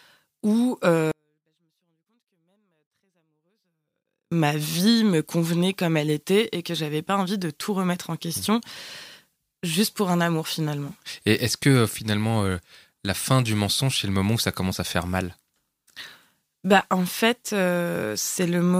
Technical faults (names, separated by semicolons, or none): 24-bit alignment error (too quiet)